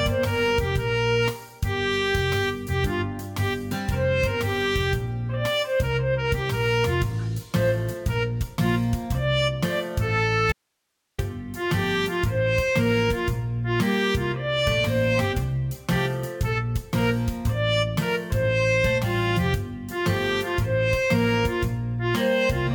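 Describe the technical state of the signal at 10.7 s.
At 10.7 s you're in an audio dropout to a faint residue, 10.52 to 11.18 s: the signal abruptly vanishes, leaving only hiss about 55 dB down, likely a break upstream with the path still live.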